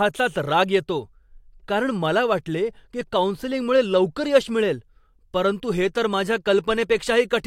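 Nothing in the speech stood out as a technical problem on listening.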